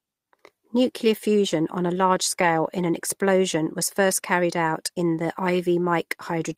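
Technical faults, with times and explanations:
2.41 to 2.47 s, lost packet rebuilt from error correction: two lost packets, about 40 ms, replayed from low-bitrate copies in the next packets, so the audio between "fusion on a large" and "in an explosion was" turns briefly rougher and noisier without a gap.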